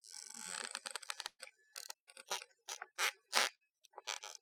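Everyday sound with two bursts of packet loss, at 1.27 to 1.42 s and 3.55 to 3.63 s. About 120 ms and 60 ms of audio go missing. The receiver stretches the last sound into a fading hiss or buzz, with a short silence in the first gap.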